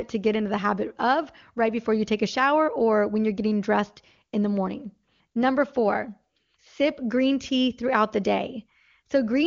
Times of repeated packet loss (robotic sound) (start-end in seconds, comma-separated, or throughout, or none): none